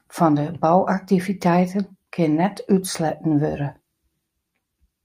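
A speech recording with nothing technically wrong to report.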